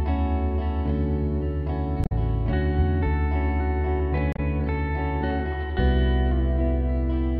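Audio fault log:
2.03–2.12 s and 4.33–4.39 s, damaged data in a compressed stream: corrupt frames are misdecoded while the decoder resynchronises, giving brief glitches in the music.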